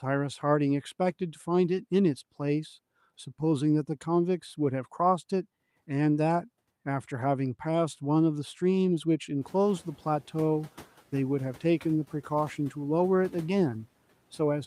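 From 9.41 to 9.92 s the noise suppressor is catching up: the room noise jumps by about 18 dB near 9.5 s, passes through with less reduction at first, then sinks by about 5 dB over roughly half a second as the estimate adapts. Unlike gating or pumping, this fade happens once and doesn't follow the speech.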